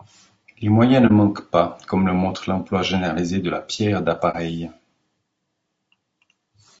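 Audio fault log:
throughout: low-delay AAC compression, likely AAC-ELD, with plainly audible rough, grainy speech and noise between harmonics, as fits a low bitrate around 32 kbps.
1.07–1.12 s and 4.31–4.35 s: AAC frame loss with muting. About 30 ms drops to silence after "moyens ne" and after "généralisé de la pierre", which fits one zeroed frame each time. The overlapping windows fade it out and back in, leaving brief dips.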